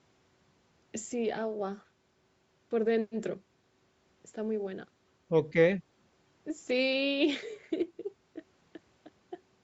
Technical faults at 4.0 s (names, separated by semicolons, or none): none